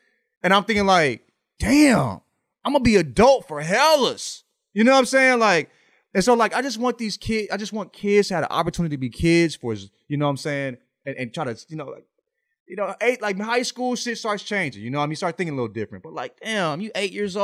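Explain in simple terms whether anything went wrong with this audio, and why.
Nothing went wrong here: the speech comes through with no audible technical faults anywhere in the recording.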